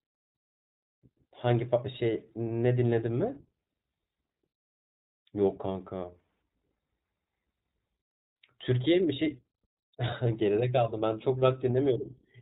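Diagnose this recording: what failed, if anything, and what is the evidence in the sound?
The codec stage failed: the whole speech recording has passed through the iLBC codec. A spectrogram shows a hard ceiling at 4 kHz for the entire clip, with nothing above it. The audible damage is rough, slightly synthetic speech. iLBC codes each frame's excitation independently of the previous one, and that roughness fits its 20 ms, 15.2 kbps mode. On a zoomed waveform, the fine detail also looks smoothed.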